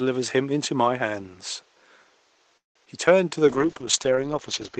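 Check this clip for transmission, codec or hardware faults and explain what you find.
Three transmission faults appear in the speech, all in the last half of the clip.

From 2.57 to 2.77 s there is a call audio freeze, likely from packets held up in transit until the jitter buffer ran dry. The last sound is stretched into a fading buzz or hiss, then about 160 ms of near-silence, and the speech resumes where it stopped. The delay grows by 180 ms, but nothing is lost.

Between 2.85 and 2.88 s, short concealed packet loss drops about 20 ms of audio before it reaches the decoder. The receiver patches only about 7 ms by extending the preceding sound and then blends back, which leaves a brief smear or wobble.

From 3.49 s to the end, a call bitrate drop cuts the encoder from 32 to 8 kbps after the bandwidth estimate falls. Coarser coding and a bandwidth cut from 20 kHz to 8 kHz make the speech rough, watery or muffled.

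Room noise sits about 38 dB below the speech. It is part of the recording, not a system fault.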